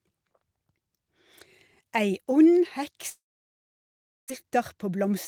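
A speech clip with two faults. From 3.09 to 4.32 s a long network dropout is the likely cause: a brief fading buzz, then about a second of flat silence on the waveform, with roughly 0.84 s of speech lost. From 4.43 to 5.10 s a jitter buffer speed-up removes small pitch-period slices, about 50 ms in total, so speech runs 6% faster at unchanged pitch, with slightly compressed syllable spacing on the spectrogram.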